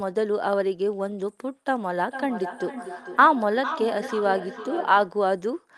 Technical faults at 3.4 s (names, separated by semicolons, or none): feedback echo between two devices